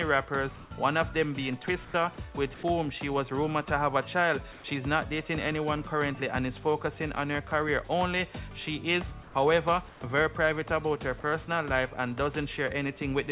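Comfort noise in place of the background appears at 0.56–0.71, 1.85–1.94, 2.54–2.63, 4.52–4.64, 9.23–9.35 and 9.89–10.01 s. Each gap lasts 90 to 150 ms. The real background gives way to a flat, featureless hiss. This is likely discontinuous transmission, with the receiver synthesising filler noise. The level mostly holds within about 2 dB, but dips about 4 dB at 9.23 s. Nothing sounds above 4 kHz.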